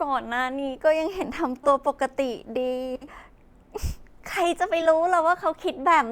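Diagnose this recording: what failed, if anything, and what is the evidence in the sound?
Short garbled flutters at 1.64–1.68, 2.95–3.08 and 4.81–4.86 s: network frames out of order, with neighbouring 20 ms blocks (60 ms at 2.95 s) decoded swapped.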